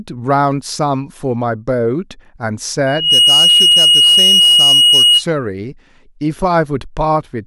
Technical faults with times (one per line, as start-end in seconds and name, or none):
2.86-5.23 loudspeaker feedback squeal